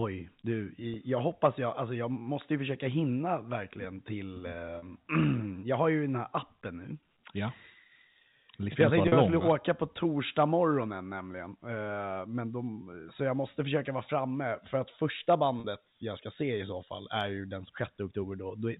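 At 0.94 to 0.96 s, then at 4.78 to 4.82 s just after "hinna verkligen till eh", 9.08 to 9.12 s after "jag tänkte", and 15.60 to 15.64 s between "framme för att första" and "jag ska se i", you get packet loss with pitch repetition. A 20 ms gap first, then 40 ms ones, which points to one and then two lost packets. The receiver bridges each by looping the last pitch period, so there's a brief held, buzzy smear through the narrowband G.711 telephone sound.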